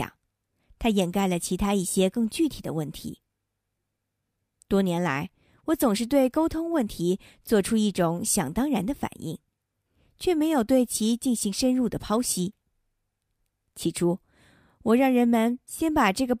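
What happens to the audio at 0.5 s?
Nothing goes wrong at 0.5 s; the speech runs on intact there, with no dropout, click or other fault.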